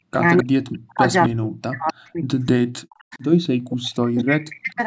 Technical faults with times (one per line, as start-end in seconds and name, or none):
0.12-0.43 echo leak
0.43-3.13 speech suppressed in double talk
1.24-1.29 echo leak
1.87-1.93 echo leak
2.90-3.46 echo leak
3.59-4.83 speech suppressed in double talk
4.17-4.22 echo leak